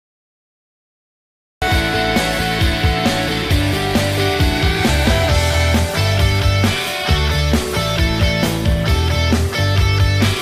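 The audio opens on digital silence until 1.62 s, then enters abruptly mid-sound with no natural attack: a cut-off start, where capture began late.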